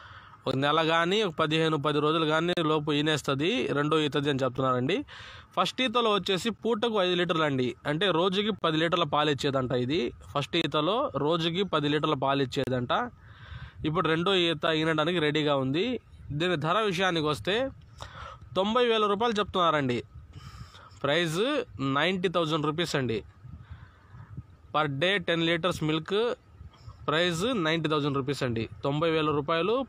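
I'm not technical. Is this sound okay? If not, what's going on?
No. There are short, sharp dropouts of silence. This is a gap between stream segments. The audio arrives in 2-second pieces, and the pieces don't quite join up. The player fills each small hole with silence, about 9 to 39 milliseconds long. You hear this at 0.51–0.54, 2.53–2.57, 4.57, 6.58, 8.59–8.62, 10.62–10.64, 12.64–12.67 and 14.67 seconds. The holes come roughly every two seconds. No sound is actually lost.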